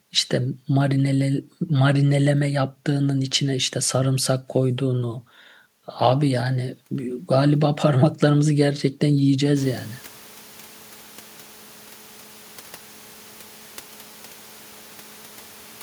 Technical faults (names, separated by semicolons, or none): none